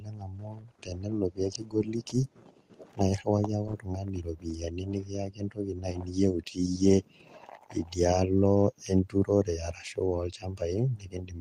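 This speech clip shows no technical faults; it carries the coding texture of a call path, and its top end stops near 12 kHz, which fits an Opus connection at around 24 kbps.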